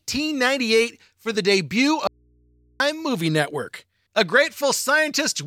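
Just after "for the debut", from 2.07 to 2.80 s, an audio dropout to a faint residue removes the speech for about 0.73 s, likely a momentary input loss. Mains hum, roughly 40 dB down, fills the abrupt gap, unlike a pause or a dead-silent dropout.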